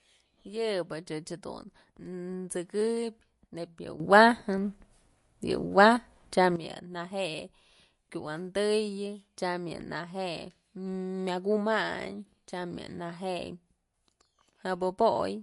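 Speech throughout, with plainly audible codec damage that points most likely to MP3 compression at a low bitrate, which fits roughly 48 kbps. The top end stops dead at about 11.3 kHz, where the encoder's fixed lowpass removed everything above it. Below that, the coder has run short of bits and dropped the weaker frequency components, which come and go from frame to frame. This gives the speech a watery, swirling texture, with metallic chirping around s sounds and smeared attacks. From 4.0 s to 6.56 s there is a sudden gain jump. The level steps up by about 12 dB at 4.0 s and drops back at 6.56 s, each change happening instantly rather than ramping. The background noise rises and falls with the speech, so the whole signal was scaled, not just the talker. That pattern fits a digital gain setting or bit shift applied without any fade at either edge.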